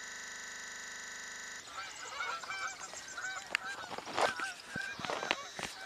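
From the very start until 1.6 s, a system hang loop is already under way. The playback froze while the hardware kept replaying one 40 ms stretch of its ring buffer. It repeats at 25 Hz, giving a rough, rattling buzz.

Between 4.76 and 5.02 s comes a loud pop. Two sharp pops sit on top of the sound, peaking roughly 5 dB above it. They are likely caused by a sudden voltage step or pulse entering the signal path.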